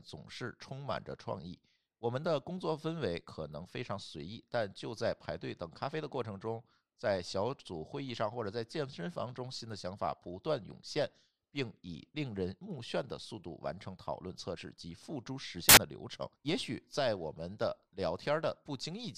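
At 15.69 to 15.77 s the reader assembles samples from the wrong bytes, misaligned or swapped, so the rapidly varying low-order bits land in the high positions. For those 80 ms the speech gives way to a burst of loud, harsh broadband noise.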